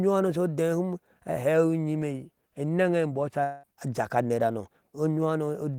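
Speech, with a long network dropout from 3.43 to 3.66 s: the sound smears into a fading buzz for about 200 ms instead of going silent, and speech resumes with roughly 200 ms missing, likely from audio packets lost in transit and concealed by the receiver.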